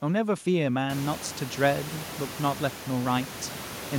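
No technical faults can be heard in the speech. Room noise in the recording space rises by about 20 dB around one second in and then stays roughly 15 dB below the speech.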